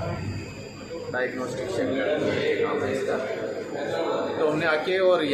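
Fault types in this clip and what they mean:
Nothing stood out on listening; no fault could be heard anywhere in the clip.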